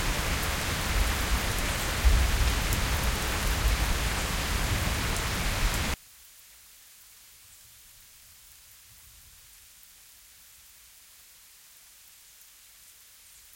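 A recording of everyday sounds. From 5.94 s to the end, it collapses to a faint residue about 27 dB down, with the centred content almost gone. That's likely one channel inverted, so whatever both channels share cancels when summed to mono, leaving only their difference.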